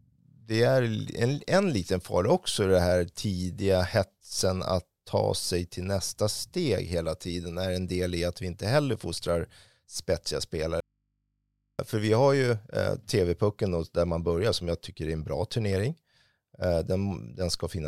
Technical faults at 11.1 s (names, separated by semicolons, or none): audio dropout to a faint residue